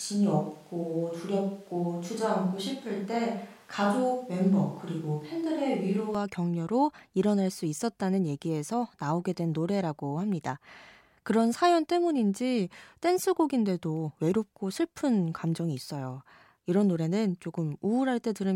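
Speech that opens already roomy and hollow, with thinner low end and room noise about 35 dB under the voice, until 6.15 s, where it snaps to close, full sound at much the same level. This is likely a switch to a distant microphone.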